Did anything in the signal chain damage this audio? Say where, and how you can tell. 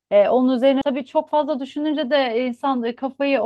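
Yes. At 0.81 s the network or jitter-buffer stage produced a skip ahead. A stretch of the speech, roughly 0.4 s, never reached playback, either lost in transit or discarded when an overflowing buffer already held later audio. You can tell because the speech jumps forward with no gap filled in: the material on either side of 0.81 s to 0.83 s is spliced almost directly, leaving an abrupt join where part of the utterance simply isn't there.

From 0.91 s to 3.40 s the jitter buffer ran a speed-up. Having accumulated more delay than its target, the receiver repeatedly cut out tiny slices a pitch period or a few long, removing around 0.15 s in total to drain the backlog. The result is speech played about 6% fast with the pitch left unchanged, so the delivery sounds slightly hurried and compressed in time rather than higher in pitch. That combination points to buffer time-scaling, not a resampling error.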